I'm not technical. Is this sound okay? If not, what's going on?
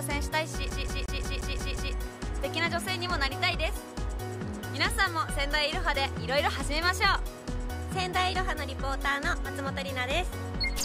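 No. From 0.70 to 1.94 s the sound is a CD stuck on one turn: the same 177 ms snippet plays seven times in a row, each with a tiny gap, giving a rapid, even stutter before playback moves on normally.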